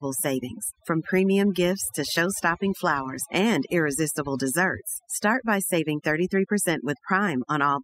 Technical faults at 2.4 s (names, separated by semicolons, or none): overdone noise removal